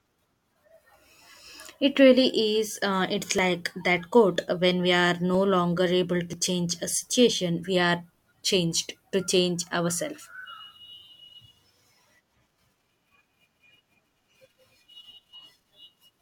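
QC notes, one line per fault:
3.39, 4.36, 5.35, 6.33 and 9.32 s: overlap between stream segments. Each is a tiny click or skip in the speech where a few milliseconds go missing and the waveform jumps. One lands just before "when we are", one between "when we are" and "longer able to change", and one after "we are changed to". The spacing in whole steps of roughly one second fits one-second stream segments whose time stamps overlap. The player trims the supposed duplicate at each boundary, but that audio was never really doubled.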